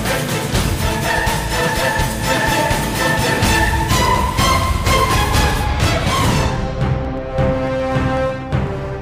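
From 0.05 s to 8.92 s, periodic USB or driver dropouts recur every 0.125 s, eight times a second. Each time the driver or bus stalls, a tiny slice of audio, a small fraction of a millisecond, is skipped outright. The splice leaves a step in the waveform, heard as a steady ticking under the signal. On a waveform this shows as evenly spaced discontinuities. A spectrogram shows them as thin vertical broadband lines at a regular spacing.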